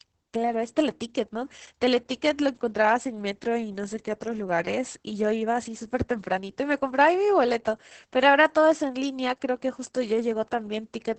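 Opus voice compression runs throughout: the speech is band-limited near 8 kHz, with coarse excitation giving a muffled, hoarse, slightly robotic sound, consistent with roughly 10 kbps SILK coding.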